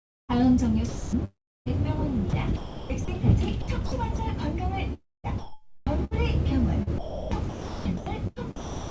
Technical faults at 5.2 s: sound chopped by the voice detector

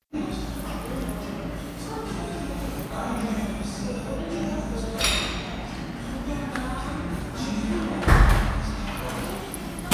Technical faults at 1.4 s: none

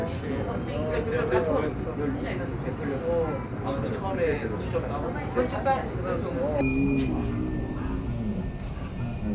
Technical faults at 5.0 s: none

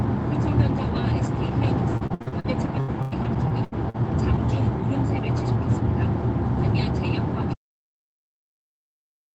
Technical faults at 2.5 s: repeated packet loss (robotic sound)

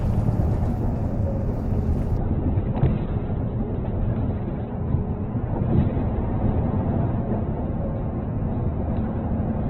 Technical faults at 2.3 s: adaptive stream at a lower bitrate

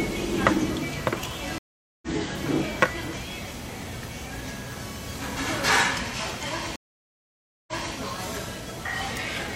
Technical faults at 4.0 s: none

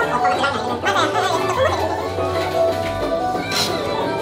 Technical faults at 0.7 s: audio read two samples at a time (double speed)

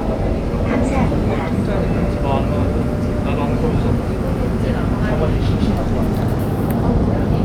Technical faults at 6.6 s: none

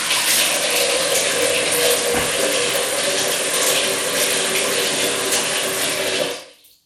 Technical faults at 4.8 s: Bluetooth SBC compression

